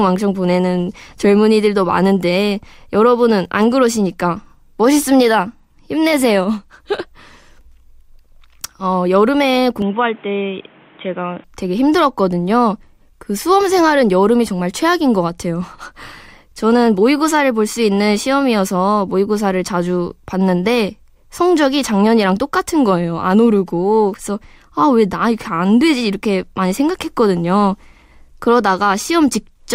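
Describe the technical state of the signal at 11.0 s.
At 11.0 s the speech is narrowed: from 9.82 to 11.44 s nothing passes above 3.8 kHz, and it turns dull and boxy with no gap at either edge. The likely cause is the input switching to a poorer device. Unlike a simple low-pass filter, this brings new background noise about 30 dB below the voice and a different tone, while the loudness stays roughly the same.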